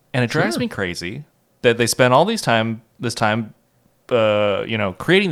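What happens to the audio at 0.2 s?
Nothing goes wrong at 0.2 s; the speech plays through that moment intact, with no dropout, click or distortion.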